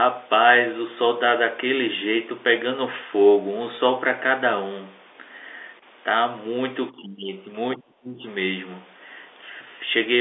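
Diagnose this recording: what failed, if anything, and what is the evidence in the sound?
The failure sits in call processing. From 7.76 to 8.23 s the speech drops by around 30 dB for about half a second, most likely speech suppressed in double talk: the echo canceller could not separate the near-end talker from the overlapping far-end echo and attenuated the near-end talker along with it.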